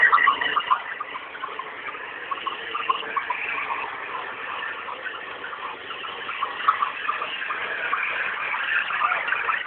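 No technical faults are audible.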